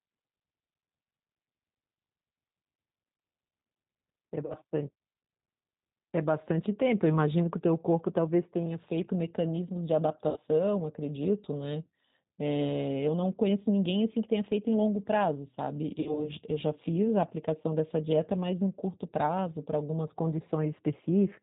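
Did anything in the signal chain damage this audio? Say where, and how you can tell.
Yes. At the codec stage, the whole clip carries plainly audible G.729 damage. The speech sounds rough and slightly synthetic, with nothing above 4 kHz. That fits 8 kbit/s coding, which rebuilds each 10 ms frame from a vocal tract filter, a pitch predictor and a few pulses.

At the network stage, VoIP packet loss concealed by the speech codec appears at 4.46–4.57 s, 10.30–10.38 s and 16.00–16.31 s. The decoder bridges roughly 40, 60 and 60 ms of missing audio by stretching its last pitch and filter into a fading buzzy tone or coloured noise. The sound stays weakened after the audio resumes.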